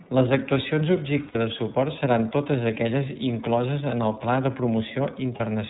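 Across the whole clip the speech sounds band-limited, slightly rough and synthetic, with nothing above 4 kHz. This is the iLBC codec, a narrowband VoIP coder that encodes each frame's excitation independently. Its damage is plainly audible here, and the sound fits the 13.33 kbps mode with 30 ms frames.

From 1.28 to 1.36 s, just before "de suport seran totes", the speech briefly turns into a held, faintly buzzy vowel, and again for a shorter moment from 5.36 to 5.41 s. These are lost iLBC frames. The decoder filled about 60 ms and then 30 ms of missing audio by repeating the last pitch cycle mixed with noise, which points to two frames lost and then one. Because each frame decodes on its own, the speech recovers almost immediately.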